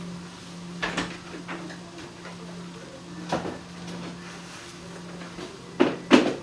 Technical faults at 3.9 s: none

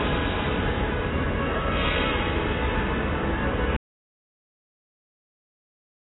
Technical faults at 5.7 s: AAC compression; audio dropout to silence

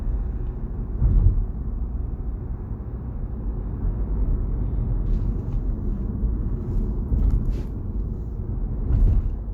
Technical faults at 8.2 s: none

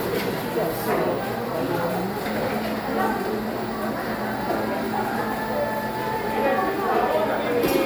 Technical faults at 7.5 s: generation loss

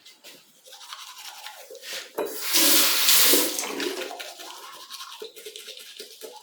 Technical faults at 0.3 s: none

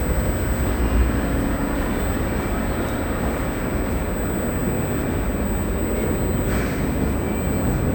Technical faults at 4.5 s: USB whine

